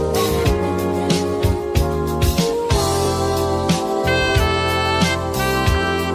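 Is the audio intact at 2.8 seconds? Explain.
Yes, the audio is intact at 2.8 seconds, with no dropout, click, distortion or other fault to be heard at that point.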